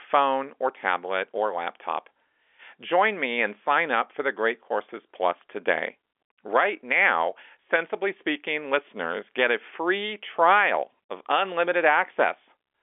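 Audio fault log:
No faults are present in this speech recording. It carries the narrow band of G.711 telephone coding, spanning about 300 Hz to 3.4 kHz, with nothing above 3.6 kHz.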